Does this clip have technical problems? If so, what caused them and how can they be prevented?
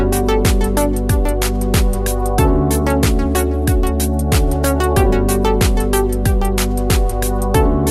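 No, there are no technical problems to report.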